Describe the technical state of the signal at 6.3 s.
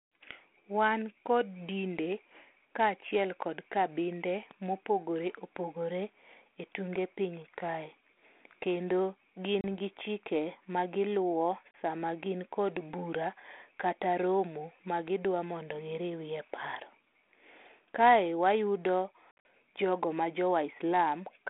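At 6.3 s the signal is intact, with nothing beyond the expected narrow telephone band and light ADPCM coding of a 32 kbit/s G.726 link.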